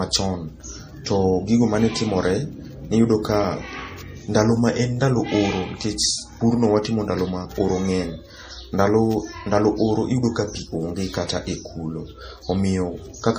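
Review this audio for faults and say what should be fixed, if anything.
Throughout the speech, an MP3 encoder likely short of bits, which fits a low bitrate around 40 kbps, has removed everything above 15.3 kHz and let weak frequency lines switch on and off between frames, giving plainly audible watery, swirly artefacts and smeared attacks. Encoding at a higher bitrate, or keeping a lossless master, would prevent it.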